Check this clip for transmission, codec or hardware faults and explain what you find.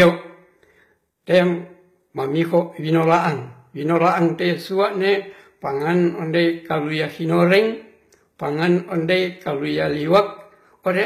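Two faults are present: codec damage across the whole recording and four short bursts of hard clipping.

Throughout the speech, s sounds come out gritty and lispy, and the treble has a bright but artificial, metallic sheen, with nothing above 14.9 kHz. This is likely HE-AAC compression at a low bitrate, around 20 kbps. The upper band is rebuilt by copying lower bands upward, so its harmonics no longer line up with the real ones.

Hard clipping shows up as brief crackles at 0.00–0.09 s, 2.56–2.58 s, 3.96–4.08 s and 10.15–10.19 s, the last just after "ondei kalia". The peaks exceed what the signal path can carry, by about 5, 1, 2 and 3 dB respectively. They are sliced flat, adding harsh high harmonics.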